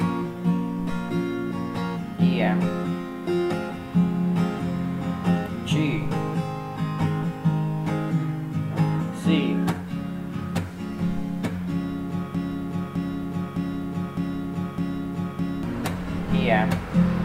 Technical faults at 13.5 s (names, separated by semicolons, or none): broken-record loop